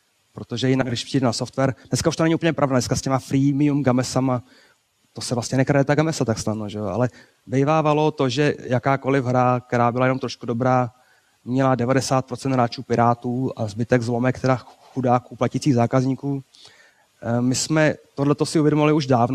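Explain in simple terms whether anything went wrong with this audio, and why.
Between 0.81 and 0.94 s there is a fault called frames out of order. Two neighbouring chunks of audio were played back in swapped order, so this short stretch sounds like a brief garbled flutter. Nothing is missing; the same sound is rearranged.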